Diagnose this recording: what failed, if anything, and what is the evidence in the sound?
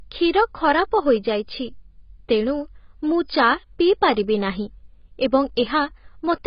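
Codec stage. Throughout, the speech is dull and smeared, with nothing above 5.1 kHz. Likely heavy AAC compression, fitting roughly 16 kbps.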